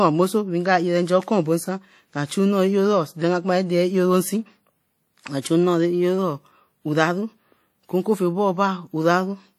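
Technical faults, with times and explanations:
Throughout: WMA compression. The speech carries a ringing, washy coloration with a hiss that rises and falls with the level, and content extends to 20.1 kHz. This is likely a transform codec such as WMA at a bitrate around 48 kbps. Its long blocks spread quantisation noise over tens of milliseconds, and weak spectral lines are discarded. The damage is plainly audible.
2.26–2.30 s and 5.41–5.45 s: pre-echo. The first comes right after "bo san nka" and the second just before "chu nnoo". In each, a short burst of hiss leads a sharp onset, spreading about 31 ms and 42 ms respectively, and the attacks sound softened. The transform spreads the noise budget for the loud part evenly across the block, so it also fills the quiet moment before the attack.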